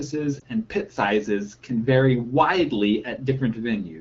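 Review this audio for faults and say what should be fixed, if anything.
A brief dip or warble in the speech from 0.40 to 0.43 s, just before "and pit sizes can", comes from lost AMR speech frames. The gap fits a single 20 ms wideband frame failing its checksum, so the decoder filled it by repeating the previous pitch and vocal tract settings at reduced gain. Stronger channel coding or a better radio link would keep frames from being corrupted and dropped.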